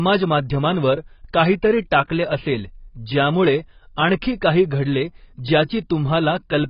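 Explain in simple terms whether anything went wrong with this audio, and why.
Yes. From start to finish the speech sounds dull and smeared, with nothing above about 5.3 kHz, and is heavily damaged. The likely cause is AAC compression squeezed too hard. Unlike a simple treble cut, it also adds a warbly, fizzy texture.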